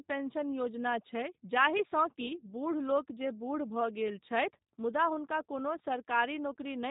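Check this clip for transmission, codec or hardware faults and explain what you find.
One codec fault is present. G.729 codec, throughout the clip: the speech has been coded as a few pulses per 10 ms frame, shaped by a pitch predictor and a vocal tract filter. That pattern fits the 8 kbit/s G.729A variant, and nothing survives above 4 kHz. The damage is plainly audible as narrow, muffled speech with a rough, buzzy, synthetic texture.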